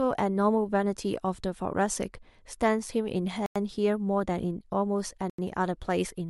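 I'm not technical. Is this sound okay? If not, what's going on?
No. The speech drops out twice, very briefly: from 3.46 to 3.56 seconds and again from 5.30 to 5.39 seconds, each gap under a tenth of a second of silence before the sound carries on. This is a Bluetooth stall. Radio interference likely delayed the wireless audio on its way to the headphones, their small store of sound ran out, and playback paused until the missing pieces arrived.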